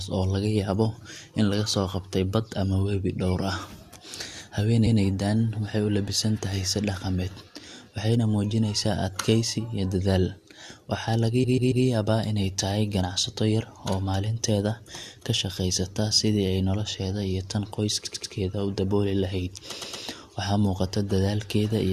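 Repeated frames occur three times in this speech clip. At 11.43 to 11.84 s, a 139 ms block plays three extra times. At 18.04 to 18.32 s, between "ay nolosheeda iyo tan" and "u dabooli", a 93 ms block repeats three extra times. At 19.79 to 20.02 s, a 116 ms block plays twice more. Each is a run of compressed frames that was duplicated, so the decoder replays the same slice. That produces a stutter and adds about 0.93 s overall.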